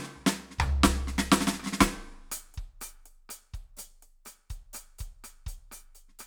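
Nothing wrong is audible anywhere in the music.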